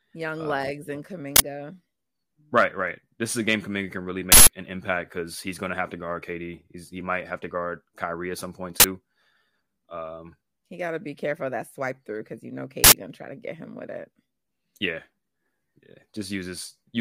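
Uninitialised buffer bursts hit this speech recording at 1.36–1.40 s, 4.32–4.48 s, 8.80–8.84 s and 12.84–12.92 s. Each is a loud blast of digital noise lasting 40, 160, 40 and 80 ms, as blocks were played before audio was written, exposing leftover memory.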